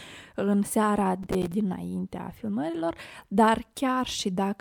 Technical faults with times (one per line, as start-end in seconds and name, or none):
1.23-1.52 processor overload crackle